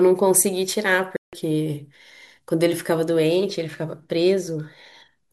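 A speech clip with a single dropout: at 1.16 s the sound cuts to dead silence for about 164 ms, coming back at 1.33 s. That's likely a Bluetooth stall, where held-up packets let the headphones' buffer run dry until resent data arrived.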